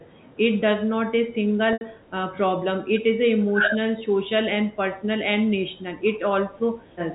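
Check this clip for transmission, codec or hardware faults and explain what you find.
Two kinds of fault are present: one packet loss bridged by pitch repetition, and three short dips that point to double-talk suppression. The speech carries G.711 telephone coding, with its usual 4 kHz ceiling.

Packet loss with pitch repetition occurs from 1.73 to 1.81 s. About 80 ms of audio went missing, which fits a run of eight 10 ms packets. The receiver filled the gap by repeating the last pitch period and letting it fade. The result is a brief held, buzzy tone where the speech should move on. Then the normal signal cross-fades back in.

Speech suppressed in double talk appears three times: 2.46 to 2.55 s, 2.97 to 3.03 s, and 3.55 to 3.75 s. The level drops by roughly 15 dB in the first two and about 10 dB in the third. The last dip is the longest, about a fifth of a second. The likely cause is an echo canceller turning the line down while both ends spoke at once. 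Each dip sounds like the talker briefly receding.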